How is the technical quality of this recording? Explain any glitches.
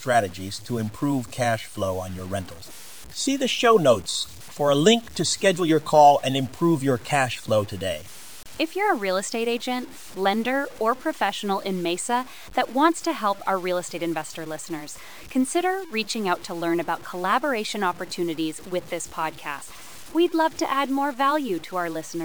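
The recording has poor technical quality, with grainy distortion across the full clip. Low bit depth without dither, likely 7-bit truncation, leaves error about 25 dB below the speech that tracks it, so quiet passages turn gritty; waveforms show staircase steps, spectrograms broadband grit.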